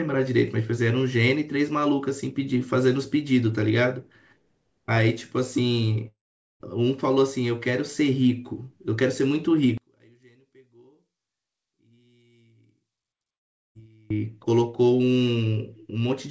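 At 6.08 s the sound breaks off for about 0.52 s, to 6.63 s. The last sound is stretched into a brief fading buzz, then roughly 0.43 s of silence. When the audio resumes, that stretch is simply gone. This is likely a long network dropout: packets stopped arriving, and the receiver's concealment could only extend the final fragment briefly before giving up.

From 9.78 s to 14.10 s the speech nearly disappears in mono playback, falling by about 34 dB. What remains is a faint residue. The likely cause is one channel inverted: with one side's polarity flipped, the common centre content cancels when the channels are summed, leaving only their small differences.

Inside that stretch, at 13.36 s, a second likely long network dropout removes about 0.4 s, to 13.78 s. Almost all of it is flat silence, with no audible concealment tail. The G.722 call path's ceiling at 8 kHz is present throughout.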